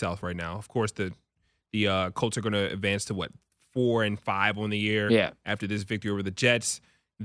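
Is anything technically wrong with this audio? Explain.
No, nothing is technically wrong.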